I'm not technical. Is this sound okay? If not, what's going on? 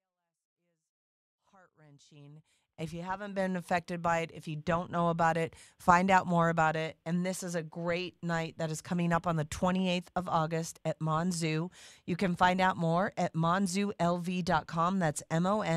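Yes, nothing is wrong with this recording. The speech opens with a smooth fade-in from the very beginning, rising gently to full level by about 3.5 seconds, the way an editor would ease a clip in.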